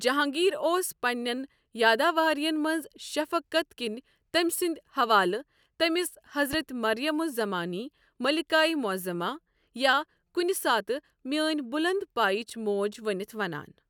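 At 6.53 to 6.56 s a single loud pop cuts across the speech, peaking a few decibels above it. A voltage pulse, likely from a switch or static discharge, was added to the signal. Unlike a dropout, the speech continues uninterrupted beneath the thump.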